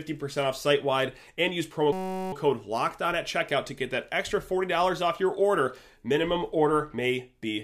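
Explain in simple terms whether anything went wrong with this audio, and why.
A system hang loop occurred: right after "site wide and use", from 1.93 to 2.33 s, the computer stalled while the sound hardware kept replaying one tiny 5.33 ms piece of audio. Repeated 188 times a second, it turns into a steady buzz instead of speech.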